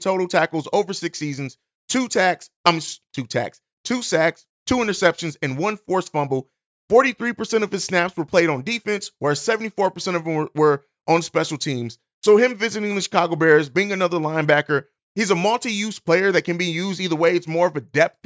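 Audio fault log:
No faults were found in this speech clip.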